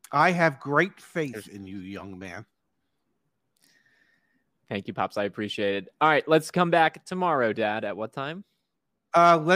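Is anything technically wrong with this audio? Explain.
No, nothing here stands out as technically wrong; the speech comes across without any audible faults.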